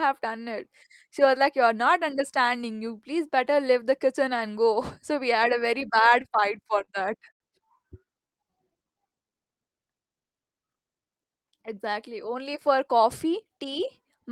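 A speech recording with four timing faults. From 6.09 to 6.89 s there are repeated stalls (stutter): seven brief gaps, the longest 31 ms, where the receiver held the last sound while late packets trickled in, giving about 0.1 s of filled audio and a dragging, stuttering delivery. From 7.31 to 7.42 s a short stall from a late packet holds one sound for 88 ms, with a slight buzz or dip, until the missing packet arrives and playback resumes from the same point. Between 8.05 and 9.35 s a jitter buffer slow-down repeats single pitch periods to rebuild reserve, adding 141 ms and running the speech at 90% speed with unchanged pitch. From 11.31 to 13.45 s a jitter buffer speed-up trims short pitch-period segments to shed excess delay, removing roughly 150 ms and making the speech sound hurried at 106% speed.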